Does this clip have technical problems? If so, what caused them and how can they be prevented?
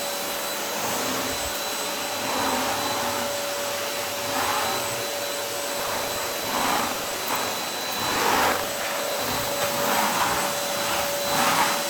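Yes. From 5.76 to 9.57 s the everyday sounds carry a steady 25 Hz robotic rattle, which is buffer tearing. Writer and hardware reader cross mid-period, so roughly a sixth of each buffer repeats audio from about 70 ms earlier. Unlike underrun dropouts, there are no silent gaps, and the rattle follows the signal. Keeping the writer at least one full period ahead of the read pointer prevents it.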